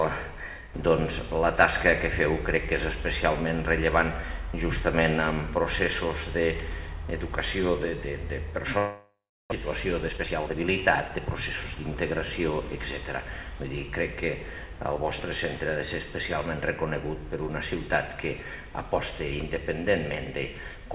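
Long network dropout, 8.78 to 9.54 s: the sound stops arriving and the receiver stretches the last fragment into a fading buzz, leaving about 0.31 s of silence before audio resumes with roughly 0.4 s missing, likely from a burst of lost or badly delayed packets.

Jitter buffer speed-up, 9.62 to 11.79 s: after the gap the buffer holds about 0.3 s too much, so the receiver trims short pitch-period slices repeatedly. The sound runs at 114% speed with its pitch unchanged and comes across as hurried, while the call path's narrow band, with nothing above 4 kHz, stays throughout.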